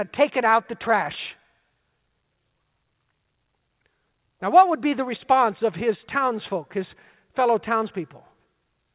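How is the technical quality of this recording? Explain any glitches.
No glitches are audible anywhere in the recording. The speech arrives through a call path with nothing above 4 kHz, a band limit that points to a narrowband telephone codec such as G.711 A-law at 64 kbps.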